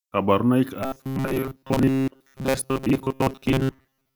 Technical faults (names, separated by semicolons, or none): robotic sound from repeated short buffers